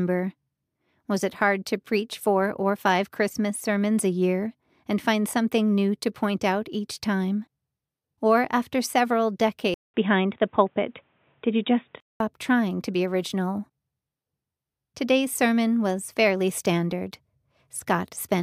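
In this speech clip, the input was likely switched to a poorer device from 9.74 to 12.20 s, after "after several": a 0.2 s silence opens the switch, then the band stops near 3.8 kHz, the level shifts about 5 dB, and new noise sits around 50 dB down until "trying to be original".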